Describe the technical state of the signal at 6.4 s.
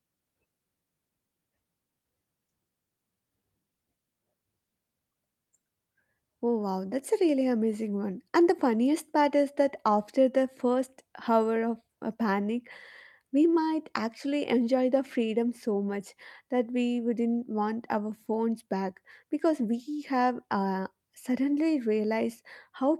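The signal at 6.4 s is intact, with no technical fault present at that moment.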